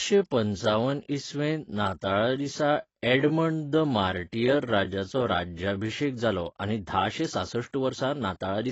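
From the start to 6.1 s the speech runs slow, at about 0.72 times normal pace, yet the pitch stays put. That points to a time-stretched section, likely made by repeating short pieces, which leaves a dragging feel. Normal pace returns at "जालो आनी धाशे सांसठ".

Throughout, the sound is dull, with nothing above about 7.9 kHz and a plainly audible warbly, fizzy texture. That fits AAC compression, likely AAC-LC at around 24 kbps. The fizz on sibilants sets it apart from a simple low-pass filter.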